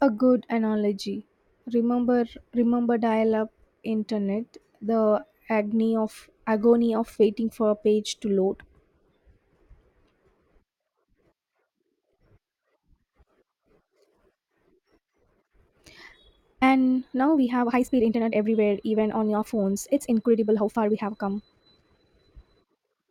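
A time-stretched section runs from 14.87 s to the end: the speech suddenly speeds up by 1.42 times at unchanged pitch, sounding rushed, likely from software dropping short pieces to fit a length.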